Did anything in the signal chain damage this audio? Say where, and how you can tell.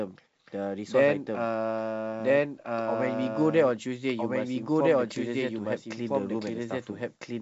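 Yes. There's a doubled audio track running the whole way through: a second, full-band copy of the speech trails the original by roughly a second and a half, at about the same level, with no decay or room colour. Likely a slower capture path recording it twice.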